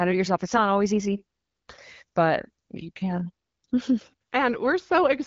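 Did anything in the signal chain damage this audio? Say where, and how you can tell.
No, no stage in the chain has damaged this speech. It has passed through an AMR wideband (HD Voice) codec that sounds as expected, with nothing above 7.5 kHz and only light coding texture, which fits the 12.65 kbit/s mode.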